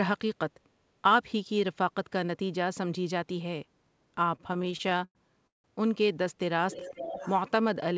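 From 4.36 to 5.66 s the speech drags and stutters, breaking into more than a dozen short hitches where the last sound is held and stretched, the longest lasting about 170 ms. These are repeated stalls (stutter): packets reached the receiver late or too slowly, so its jitter buffer kept running dry, and each time it extended the preceding audio to bridge the wait. Around 420 ms of filler accounts for roughly a third of that span, yet nothing is actually lost.

Between 6.71 and 7.40 s a delayed copy of the speech trails the original by about 462 ms, roughly 10 dB quieter. This is an echo leak, likely caused by one side playing the call through a loudspeaker while its echo canceller failed to remove all of what the microphone picked up, so the residue was sent back. The echo sits within the same band as the rest of the call, which carries nothing above 8 kHz, consistent with a G.722 path.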